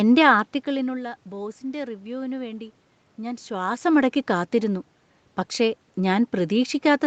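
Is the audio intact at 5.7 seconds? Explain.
Yes, the audio is intact at 5.7 seconds, with no fault at that moment.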